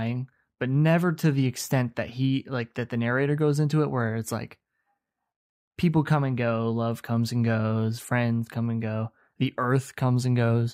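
No technical faults are audible anywhere in this recording.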